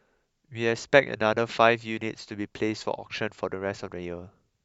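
No technical faults detected.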